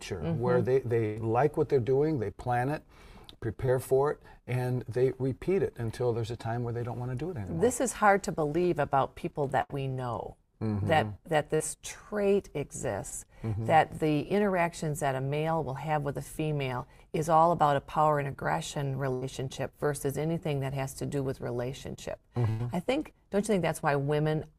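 At 1.05 to 1.18 s there is a burst of packet loss. About 100 ms of audio never arrived, and the receiver covered it with roughly 104 ms of synthesized fill. It extends the last sound, either as a held buzz or a fading hiss depending on what preceded it, lowering the level as it goes. Playback then resumes later in the stream, with the lost section skipped.

At 3.66 to 3.70 s comes a short concealed packet loss. About 20 ms went missing and was patched with about 19 ms of continuation before blending back into the real signal, which is heard as a brief smear or wobble.

Further bursts follow the same pattern. At 9.62 to 9.71 s, about 80 ms is lost and filled with roughly 76 ms.

Two more short concealed losses occur. At 11.55 to 11.62 s, about 40 ms is missing and about 45 ms is filled. At 13.10 to 13.13 s, about 20 ms is missing and about 17 ms is filled. A brief sound falling inside either gap may drop out entirely.

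The last two bursts come at 19.13 to 19.23 s, with about 80 ms missing and 79 ms filled, and at 22.49 to 22.61 s, with about 100 ms missing and 99 ms filled. Each produces the same decaying extension followed by a jump forward.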